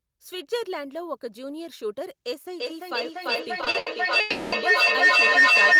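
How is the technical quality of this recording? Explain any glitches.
The technical quality is poor: the second half of this speech recording is dominated by a growing howl, and the audio also stutters and freezes within it.

From 2.59 s to the end, a feedback howl builds into a piercing tone near 2 kHz, repeating roughly every 0.3 s and peaking about 15 dB above the speech. Two devices in the same room share the call, so sound circulates from loudspeaker to microphone and grows louder with each pass.

Between 3.61 s and 3.88 s the audio drags in repeated stalls (stutter): four brief gaps, the longest 80 ms, are filled by stretching the preceding sound for 150 ms in total. Packets kept arriving late, starving the receiver's buffer, although nothing is lost.

From 4.20 s to 4.54 s the audio freezes for 320 ms. The last sound is held as a fading buzz or hiss with no silence, and playback then resumes where it stopped. 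This call audio freeze is likely caused by delayed packets that emptied the jitter buffer.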